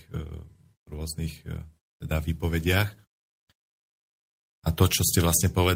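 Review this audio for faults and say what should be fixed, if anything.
Nothing stood out on listening, so there is nothing here that needs fixing.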